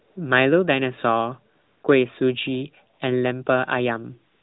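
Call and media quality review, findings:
Steady, smooth hiss replacing the real background in speech pauses at 0.00–0.16 s, 1.54–1.84 s, 2.94–3.00 s, 4.32–4.43 s. AMR comfort noise: sender flagged silence, receiver synthesised noise from level/spectrum description, over a 4 kHz-limited AMR narrowband band.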